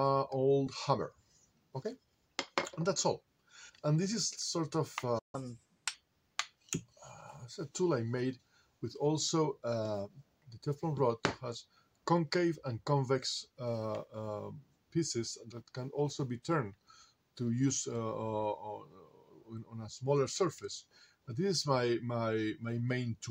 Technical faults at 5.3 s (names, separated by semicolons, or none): playback stall; catch-up at higher speed